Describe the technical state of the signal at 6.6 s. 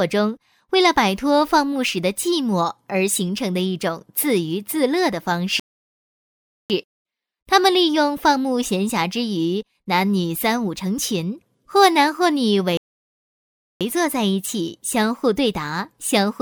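At 6.6 s the output is silent. A playback stall runs from 5.60 to 6.70 s, about 1.1 s. The player likely ran out of data before resuming.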